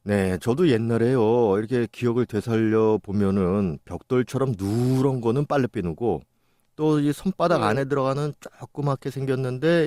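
Weak DAB reception let a small fraction of bit errors slip past the error correction into the MP2 audio data from 5.11 to 5.23 s. Corrupted samples put short blips of noise in individual sub-bands and corrupted scale factors make sub-bands jump in level, giving DAB burbling: a brief burble over the speech, which fits around five damaged frames.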